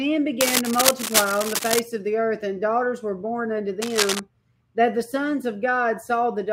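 Bursts of dense, uneven scratching and rustling sit over the sound from 0.41 to 1.79 s and again from 3.82 to 4.20 s, roughly as loud as the sound itself. This cable scratch noise likely comes from a worn cable, connector or control being moved, its contact resistance jumping rapidly.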